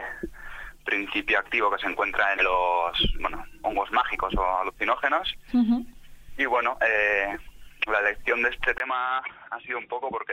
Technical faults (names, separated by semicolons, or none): input switched to a poorer device